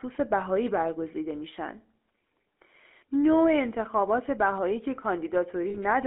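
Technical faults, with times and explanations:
Throughout: GSM full-rate codec. The speech has a buzzy, gravelly roughness that is plainly audible, consistent with a 13 kbps GSM full-rate coder. The coder models the vocal tract as a filter and excites it with a sparse, regularly spaced pulse train built from only a fraction of the original excitation samples, so fine detail in the voice source is replaced by a coarse grid. The line is band-limited to roughly 250 Hz to 3.4 kHz, removing low body and upper brightness.
5.70 to 5.78 s: lost GSM frames. Here the speech briefly turns into a rough, metallic ring instead of continuing normally. The decoder lacked valid data for about 40 ms, which fits two missing 20 ms frames, so it reused the filter and excitation settings from the last good frame. Repeating those frozen parameters produces the static, ringing tone. The gap is short enough that the sound is held rather than fading to silence.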